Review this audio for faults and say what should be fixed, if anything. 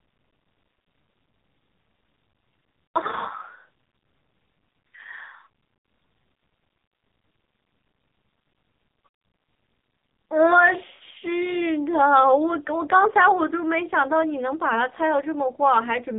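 The speech sounds buzzy, thin and synthetic throughout, with nothing above 4 kHz. That is heavy damage from the AMR narrowband mobile codec, whose pulse-driven vocal tract model at a very low rate, likely around 6 kbps, strips detail from the voice. To prevent it, use a higher AMR mode or a wideband codec.

At 2.86 to 2.98 s and 10.94 to 11.01 s the voice smears, drawls and sags briefly before recovering roughly. These are lost AMR speech frames. The decoder repeated the last good settings with fading gain across gaps that fit four and three missing 20 ms frames. To prevent it, improve radio link quality or add error protection.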